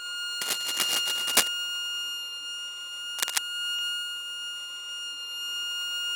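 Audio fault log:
0.41–1.48 s and 3.18–3.39 s: cable scratch noise. Dense, uneven rustling bursts sit around 5 dB above the sound. A worn connector or cable being moved is the likely cause.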